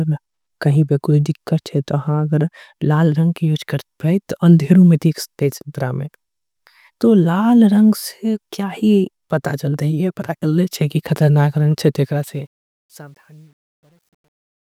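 From 11.98 s to 14.7 s, the gain stage handling the fade-out, which otherwise glides down from around 12 s, discards low-order bits without dither, a coarseness consistent with roughly 10-bit resolution. Truncation distortion on the fade results: as the speech sinks toward the smallest step, the waveform collapses into blocky square steps. From 12.83 s to the end at 14.7 s, the tail turns gritty.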